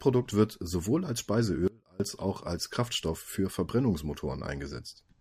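A speech clip with an audio dropout to a faint residue from 1.68 to 2.00 s, right after "wird sowohl als" and before "auch als". For about 0.32 s the speech collapses abruptly to a faint trace roughly 30 dB below its normal level, then snaps back mid-phrase. That hard edge rules out a natural pause or fade. The likely cause is a brief loss of the main signal path while the chain downstream stayed live and passed only a low leak.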